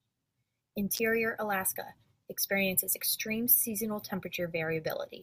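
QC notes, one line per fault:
0.95–0.99 s, electrical switching spike. A sharp snap sits on top of the speech, peaking at about -15 dBFS. It lasts only a few hundredths of a second. The likely cause is a nearby switch or static discharge arcing and coupling into the audio line.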